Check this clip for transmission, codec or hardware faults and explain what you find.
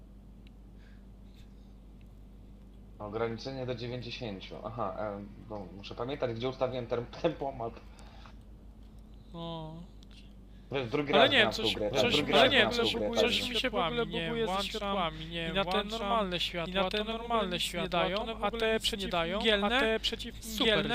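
One fault turns up: a doubled audio track from 11.48 s to the end of the clip. At that point a second full-band copy of the sound cuts in abruptly, trailing the original by about a second at roughly the same level, with no decay or room colour. Everything is heard twice, one second apart. The likely cause is the same audio being captured again through a slower path, or an edit leaving two copies out of step.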